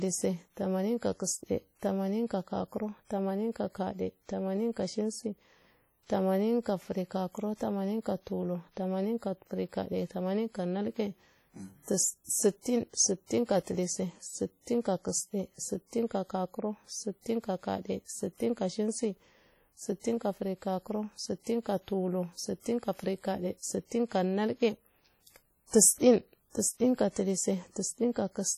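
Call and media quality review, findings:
WMA compression across the whole clip. Heavy ringing and washy smear on the speech, with hiss that breathes with the signal. Likely cause: WMA transform coding, where long blocks spread quantisation noise over tens of milliseconds. Damage fits a low bitrate, around 32 kbps. Content extends to about 20.1 kHz.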